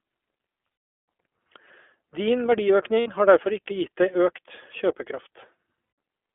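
Throughout, the sound has the narrow, slightly rough and synthetic quality of the iLBC codec. Nothing below 300 Hz or above 3.4 kHz gets through. The damage is plainly audible. The texture fits the 15.2 kbps mode with 20 ms frames. Each frame's excitation is coded on its own.

Lost iLBC frames come next. Packets go missing and the decoder fills each gap by repeating the last pitch cycle mixed with noise. The first gap is at 1.03 s. A second runs from 3.00 to 3.08 s, about 60 ms, just before "har derfor ikke". A third runs from 5.84 to 5.98 s, about 140 ms. Each sounds like a held, buzzy vowel. The speech snaps back right after, because each frame stands alone.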